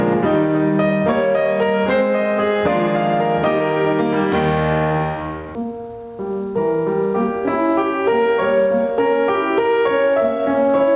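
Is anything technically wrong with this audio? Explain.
Yes. Gain pumping runs throughout: input gain likely set far too high drives a fast limiter, so the music ducks under each loud hit and swells back by about 15 dB in the gaps.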